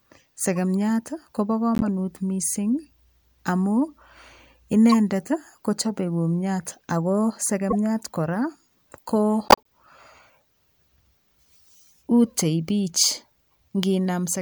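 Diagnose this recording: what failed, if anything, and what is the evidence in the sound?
The codec stage failed: corrupt frames were decoded and played. Short foreign chirps and noise bursts cut into the speech at 0.56 s, 1.75–1.83 s, 4.90–4.94 s, 7.70–7.74 s and 9.48–9.67 s. They grow from faint to fairly loud, and the last and longest spans several frames. Damaged bitstream data sent wrong gains and spectral codes to the synthesiser, so each burst carries energy at unrelated frequencies. Packet loss would instead produce a smoothed, concealed or muted gap, and a buffer glitch would produce a sharp broadband click.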